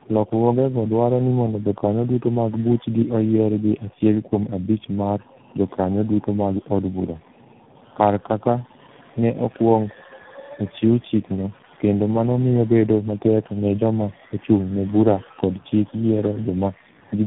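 Tandem speech coding, throughout: the speech sounds like it was coded three times in a row, which fits AMR-NB twice then G.726. Each stage re-coded the previous one's damage, leaving it rough, warbly and muffled, with nothing above 3.8 kHz.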